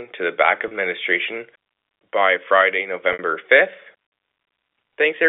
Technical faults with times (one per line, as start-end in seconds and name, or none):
0.68-0.71 packet loss with pitch repetition
3.13-3.19 packet loss with pitch repetition